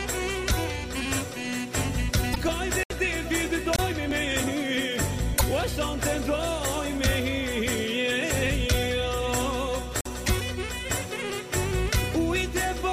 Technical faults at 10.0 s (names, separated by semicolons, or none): block of digital silence